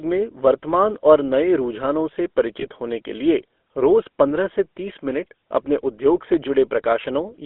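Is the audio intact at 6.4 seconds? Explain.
No. Between 6.34 and 6.46 s a loud pop lands on top of the speech: two sharp pops in quick succession, standing around ten decibels above the signal, with the speech continuing underneath. The likely cause is a sudden voltage step or pulse, from a plug, a switch, static or a driver glitch, shaped by the circuitry that follows it. Unlike a dropout or gap, nothing is removed; the pops are added energy, and their loudness separates them from a tiny digital click.

The moment also carries the GSM full-rate codec damage present across the whole clip. The speech is confined to roughly 250 Hz to 3.5 kHz and has a plainly audible buzzy, gravelly roughness, which fits a 13 kbps GSM encoding that models the vocal tract and drives it with a sparse, regularly spaced pulse excitation. That grainy buzz is what separates it from a clean but band-limited telephone line, which would sound thin without the roughness.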